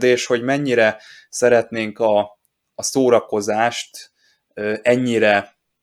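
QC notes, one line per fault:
No faults found. Nothing in the speech needs a note.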